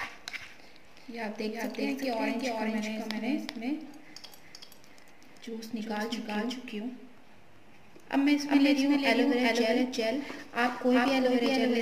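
From start to end the audio carries a doubled audio track: a second, full-band copy trails the original by roughly 400 ms at about the same level, with no decay or room colour. The likely cause is a slower second capture path or misaligned edit.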